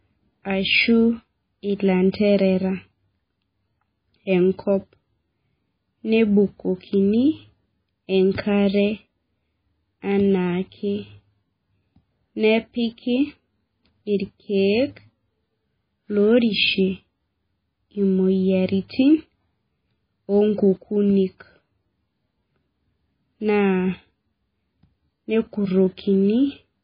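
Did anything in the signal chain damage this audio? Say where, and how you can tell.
Yes: MP3 compression throughout, at the codec stage. The treble stops at 5 kHz and weak bands swirl from frame to frame, which points to a likely 16 kbps bitrate.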